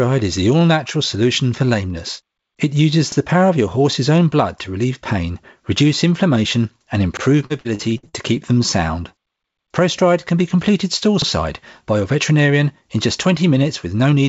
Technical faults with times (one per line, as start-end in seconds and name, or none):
3.12-3.17 overlapping chunks
7.17-7.22 overlapping chunks
7.46-8.15 repeated packet loss (robotic sound)
11.22-11.27 overlapping chunks